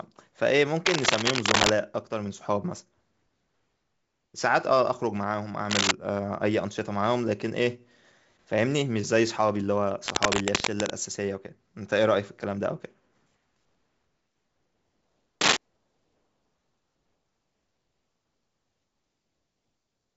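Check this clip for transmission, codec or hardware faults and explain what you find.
Cable scratch noise appears four times in the speech, from 0.86 to 1.73 s, 5.70 to 5.91 s, 10.06 to 10.90 s and 15.41 to 15.57 s. Each burst is dense, uneven scratching and rustling, roughly 5 dB above the speech. The likely cause is a worn cable or connector being moved, so its contact resistance jumps around. The G.722 wideband coding path can be heard through its band limit near 7.7 kHz.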